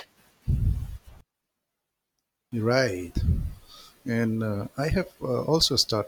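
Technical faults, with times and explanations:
1.21 to 2.52 s, one channel inverted: the speech drops by about 24 dB to a faint copy, likely because one side's polarity flipped and the centre cancels in mono.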